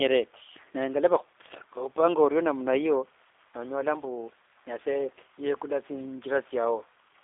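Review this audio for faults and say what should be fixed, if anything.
Throughout the speech, a G.729 codec leaves the sound rough and plainly synthetic, which fits a narrow 8 kbit/s voice line. A spectrogram shows energy confined between 300 Hz and 3.6 kHz, with a hard ceiling and blurred harmonics, because each 10 ms frame is rebuilt from a vocal tract filter, pitch predictor and a few pulses. Record or transmit over a wideband path rather than a G.729 telephone leg.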